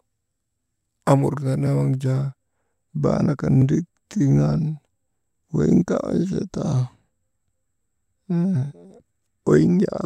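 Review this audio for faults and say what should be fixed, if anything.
At 3.62 s the speech drops out for about 1.33 ms, a block of digital silence that points to a 64-sample buffer not filled in time. The gap is too short to hear as silence and comes across as a tick or dip. Unlike a plain click, there is a short gap. Prevent it by enlarging the output buffer or raising the audio thread's priority.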